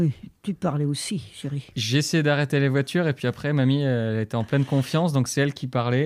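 A single sharp click at 4.54 s is likely dropped samples: a tiny fraction of a millisecond goes missing, so the waveform jumps abruptly.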